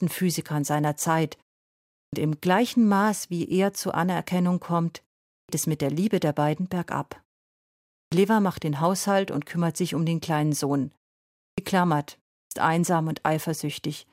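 Speech whose phrases start abruptly out of silence, as if the first sound of each were cut away. This happens at 2.05, 5.4, 8.04, 11.5 and 12.43 s, each time losing roughly 80 to 90 ms after a pause of 0.3 to 0.9 s. This is a clipped start after a pause: the output device sleeps during silence and takes that long to wake, swallowing the onset.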